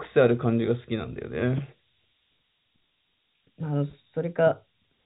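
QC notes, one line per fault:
Throughout: low bit depth with noise shaping. 7-bit rounding leaves a steady hiss only about 15 dB down, tilted toward the top of the telephone band, unlike level-following codec noise.
2.37 to 5.05 s: section at the wrong speed. The speech runs 1.16 times faster, about three semitones higher and hurried together, which distinguishes it from pure pitch shifting. A mismatched playback clock is the likely cause.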